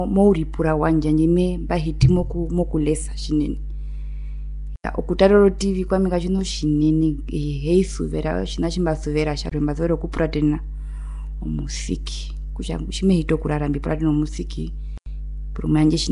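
A ground loop or nearby transformer is coupling the power line into the speech throughout, leaving a steady 50 Hz mains hum roughly 10 dB below the voice.

Low-bitrate block coding, likely Nellymoser compression, also runs throughout. It starves weak bands of bits and fills them with noise, so the speech sounds hissy, smeared and underwater, with nothing above 10.6 kHz.

The output buffer was likely not filled in time at 4.76 to 4.84 s, 9.49 to 9.52 s, and 14.98 to 15.06 s. Each time this drops a block of digital silence, a hard-edged hole. The holes last 85 ms, 21 ms and 85 ms, which fits 4096- and 1024-sample buffers.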